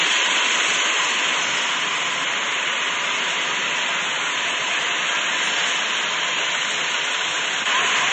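From start to finish the audio lacks all content above 8.8 kHz, with watery, swirling artefacts and smeared attacks. That points to likely MP3 compression at a low bitrate, around 32 kbps.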